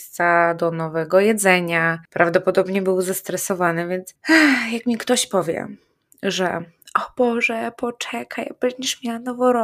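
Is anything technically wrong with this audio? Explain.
No, nothing technically wrong turns up here, so this bit of speech is fine as it stands.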